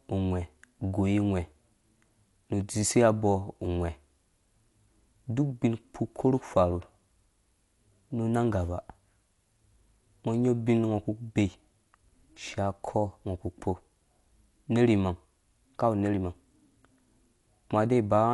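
Dolby Digital compression, present throughout: this speech has nothing above 11.6 kHz and sounds dull, with rough, fluttering noise around tonal parts. That is likely from low-bitrate AC-3 coding, which fits about 64 kbps: the encoder narrows the band and starves many frequency lines, so the decoder fills them with dither noise.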